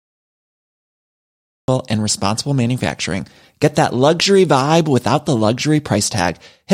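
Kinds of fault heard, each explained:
Cut-off start at 1.68 s: capture began late, so digital silence gives way abruptly mid-sound with no natural onset, just before "and responsible manufacturing".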